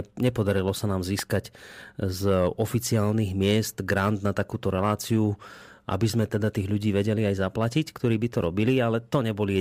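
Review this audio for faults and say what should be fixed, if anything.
A loud pop hits at 1.19 to 1.21 s, well above the speech, which continues underneath. It is likely a voltage spike from static or a switch. Ground the equipment and avoid switching during recording.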